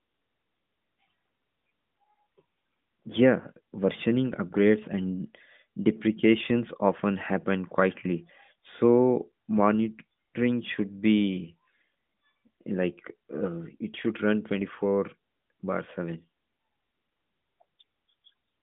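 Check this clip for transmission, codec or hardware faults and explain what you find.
One transmission fault is audible, a single lost AMR speech frame. The sound passes through an AMR narrowband mobile codec, with a line band of roughly 150 Hz to 3.6 kHz and light coding damage that fits the 12.2 kbps mode.

Lost AMR speech frames, at 8.54 s, right after "deprecations often happen quietly": a radio error corrupted one frame so it failed its checksum. The decoder filled the gap by repeating the previous frame's pitch and vocal tract settings at reduced gain. The result is a brief dip or warble about 20 ms long, consistent with one missing 20 ms frame, before the speech continues.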